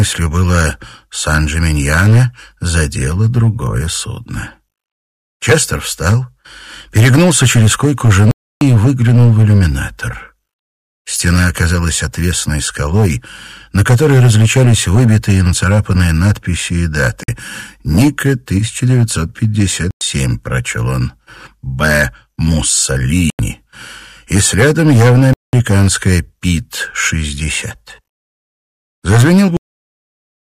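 The sound drops out to silence five times: at 8.31 s for 0.3 s, at 17.23 s for about 50 ms, at 19.91 s for 0.1 s, at 23.30 s for about 90 ms, and at 25.33 s for 0.2 s. Each time it picks up again right after the gap. That pattern is most likely a Bluetooth stall. Interference delays packets, the headphones' buffer empties, and playback simply waits until the resent data shows up.

Then at 29.57 s there's a cut-off end. The audio stops dead mid-sound and goes straight to digital silence with no decay at all. The final stretch of buffers never got written out, so nearly a second at the tail is just gone rather than fading naturally.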